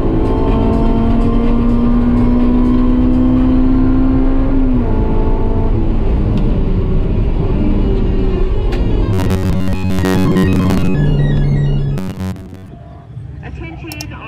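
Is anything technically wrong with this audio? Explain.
Yes. From 9.13 to 10.95 s and again from 11.98 to 12.68 s there is robotic sound from repeated short buffers, likely because audio arrived too seldom and a roughly 11 ms buffer was replayed for most of the time. This stamps a rigid metallic buzz near 94 Hz onto the sound.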